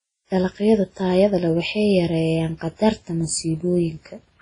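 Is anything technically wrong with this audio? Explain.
Yes. The whole speech clip shows transcoding between lossy codecs: nothing above 10.1 kHz survives, and the different codecs' artefacts sound layered, likely a low-bitrate WMA pass later re-encoded to Vorbis, with the second codec wasting bits on the first codec's damage.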